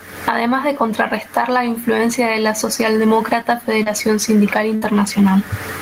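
A speech recording with gain pumping throughout, a swing of around 25 dB, likely from excessive input gain driving a fast limiter. The room noise sits about 41 dB below the speech. A lost packet rebuilt from error correction occurs three times, at 1.41–1.43 s just before "la influencia de la", at 3.86–3.88 s, and at 4.84–4.86 s, each a 20 ms stretch that sounds rougher and noisier because the decoder played a low-bitrate redundant copy. Short concealed packet loss at 3.83–3.88 s, just after "influencia de la socialdemócrata", leaves a brief smear: about 20 ms of audio was missing and the receiver extended the preceding sound to cover it. A burst of packet loss at 4.76–4.84 s drops about 60 ms of audio, heard as a fading held sound before the speech resumes further along with that portion gone.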